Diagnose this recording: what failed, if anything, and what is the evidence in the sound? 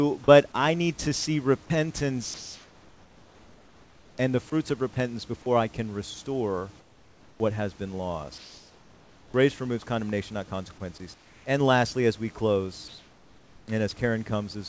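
Sound dropped by the voice detector, at call processing on the sending side. At 1.66–1.70 s and 4.94–4.96 s, brief bits of the speech give way to a smooth noise bed for 40 ms and 20 ms before the sound resumes. The cause is likely a voice detector mistaking a quiet word edge for background and halting transmission while the receiver filled in. Packet-loss concealment would repeat or smear the preceding audio; here the gap holds only noise.

Comfort noise in place of the background, also at call processing. In five pauses, at 2.34–4.18 s, 6.80–7.40 s, 8.38–9.34 s, 11.14–11.46 s and 12.88–13.68 s, the room background, about 30 dB under the speech, turns into a smoother synthetic hiss about 1 to 5 dB quieter. This is likely discontinuous transmission, with noise generated at the receiver. Genuine room noise would keep its texture across each pause boundary, while this shifts in character. 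The audio stops at 8 kHz, consistent with a G.722 call path.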